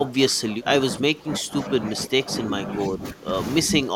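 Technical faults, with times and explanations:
0.00 to 3.33 s, speech suppressed in double talk: for nearly the whole opening stretch the speech sinks and recovers in pieces, falling at its deepest by about 15 dB. This is likely an echo canceller that heard both ends active at once and, unable to separate the near talker from returning loudspeaker echo, turned everything down.
3.65 to 3.96 s, speech suppressed in double talk: the same ducking returns for the final fraction of a second, again reaching roughly 15 dB down as the suppressor likely clamps the signal once more.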